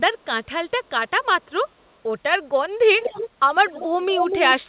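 From 3.0 to 3.3 s, and again from 3.65 to 4.5 s, an echo leak is audible: a delayed copy of the speech trails the original by about 245 ms. The first stretch sits about 10 dB below the speech; the second is stronger, about 5 dB down. The likely cause is a far-end loudspeaker whose echo canceller failed to suppress the microphone pickup. The echo shares the narrowband sound of the call path, with nothing above 4 kHz, consistent with G.711 telephony coding.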